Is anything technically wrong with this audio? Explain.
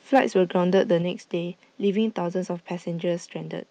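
Yes, there are two faults.

From 0.15 to 0.19 s there is microphone overload. The loudest syllable is hit with a harsh, crackly edge. This is likely an input volume set too high, driving peaks about 3 dB beyond what the converter can represent, so the wave tops are sliced flat, around a tenth of that stretch. Unlike codec distortion, which smears across a wider band and duration, this crackle is confined to the peak itself.

At 1.02 s the microphone volume is stepped down. The voice and the background noise both drop by about 4 dB at once and stay lower. That points to the call software, probably reacting to the earlier clipping, cutting the device's input gain in a single step. A speaker easing off or moving away would change the voice alone and more gradually. Here the room noise falls by the same amount at the same instant.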